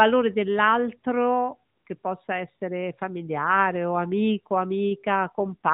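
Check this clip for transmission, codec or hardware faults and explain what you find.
One transmission fault appears near the very end. The call runs through the AMR narrowband mobile codec, so nothing above 4 kHz comes through.

From 5.40 s to 5.73 s there is an AMR rate drop. The band stays the same and the sound doesn't break. It turns rougher, buzzier and more synthetic. That fits the network pushing the codec from 12.2 down to 5.9 kbps to protect a weak link.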